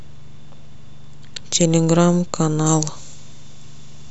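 A speech clip that turns abruptly thin, bright and hissy from 2.66 s to the end, the sign of pre-emphasis left on. The treble boost applied for transmission was never undone, lifting 10 kHz about 13 dB above 1 kHz, which fits a 75 µs FM curve. On a spectrogram the upper bands brighten sharply from that point; on the waveform sibilants turn into taller, spikier bursts.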